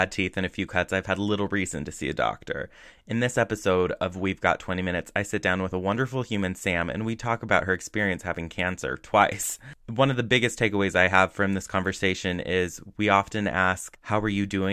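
No faults detected anywhere in the recording; the signal runs intact from first sample to last.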